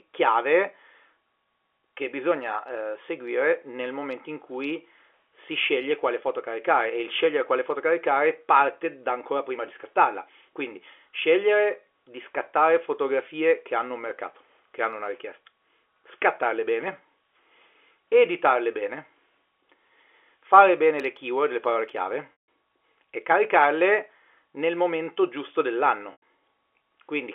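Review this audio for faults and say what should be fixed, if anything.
Packet loss with pitch repetition: the receiver lost about 160 ms of audio at 22.32 s and 100 ms at 26.12 s, which points to 20 ms packets. It bridged each gap by repeating the last pitch period, heard as a brief buzzy hold that fades to silence before the sound cross-fades back in. The band-limited 300 Hz to 3.4 kHz sound of the telephone coding is expected. Prevent recurrence with forward error correction or a deeper jitter buffer on the network path.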